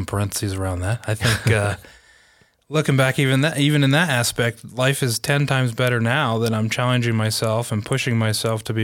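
Nothing in this speech recording stands out as a technical fault, so there's nothing here to point to at any moment.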